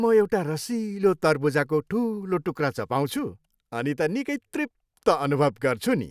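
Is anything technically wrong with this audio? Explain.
No, nothing technically wrong can be heard here.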